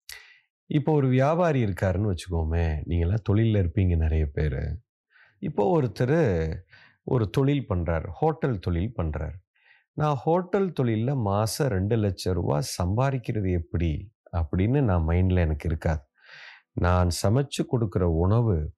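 Nothing stood out as a technical fault on listening to this speech recording.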